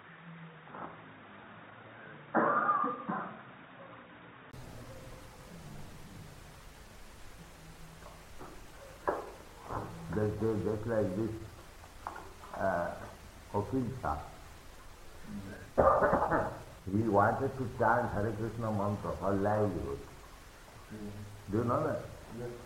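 From the start to 4.53 s the audio is band-limited, with nothing above 3.8 kHz, so it sounds dull and boxy, carrying a faint background noise of its own, roughly 45 dB down. At 4.53 s a silence of about 20 ms marks an abrupt return to full bandwidth at much the same level. That gap and the change of noise floor point to the input likely switched to a poorer device, not a gradual filtering or codec bandwidth drop.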